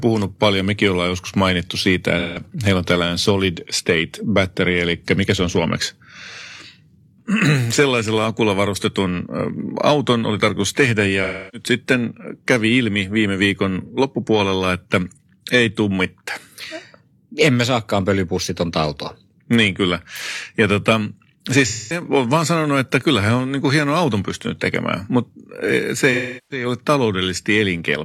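Speech runs through five dropouts from AAC frame loss with concealment. The first is at 2.18 s, lasting about 0.17 s. The second follows "oli tarkoitus tehdä ja" at 11.23 s, for 0.30 s. At 13.83 s, between "kävi ilmi viime viikon" and "loppupuolella että ei tummitta", a 43 ms gap occurs. Then 21.65 s, for 0.21 s. The last follows "tekemään mutta e se" at 26.12 s, for 0.38 s. Frames were lost. The decoder rebuilt each gap from the last good spectrum.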